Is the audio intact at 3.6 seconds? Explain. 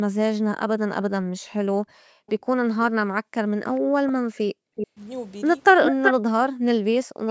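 No. At 3.6 seconds the clip is inside a stretch of speech suppressed in double talk, running from 2.9 to 4.98 seconds. The likely cause is the echo canceller mistaking the talker for loudspeaker echo while both sides spoke, so it turned the near-end signal down along with the echo. The speech dips deeply, by around 40 dB at worst, and drops out in pieces totalling about a second and a half across that span.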